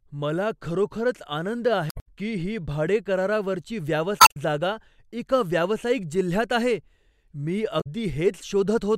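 Short glitches break into the speech at 1.87–2.06 s, 4.17–4.36 s and 7.77–7.87 s: damaged data in a compressed stream, where corrupted frames throw the decoder out of sync.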